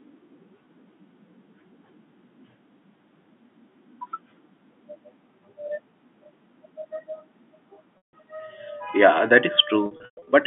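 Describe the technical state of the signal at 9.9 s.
At 9.9 s the signal is in packet loss with pitch repetition (9.86–10.27 s): scattered gaps, up to 120 ms, are patched with repeated pitch cycles, giving buzzy held tones on the short gaps, while the longer ones fade into silence.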